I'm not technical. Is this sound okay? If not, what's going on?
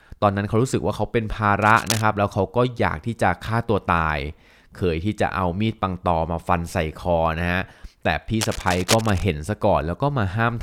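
No, there's cable scratch noise in two spots: a brief scratchy rustle from 1.62 to 2.02 s, then a longer, louder one from 8.41 to 9.25 s. It's likely a worn cable or plug being jostled, so the connection flickers and crackles over the speech.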